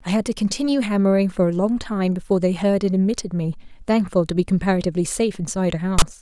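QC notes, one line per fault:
5.99–6.02 s: file tags played as audio. Text metadata bytes are decoded as samples, producing a loud, lopsided rasp with abrupt edges near the end.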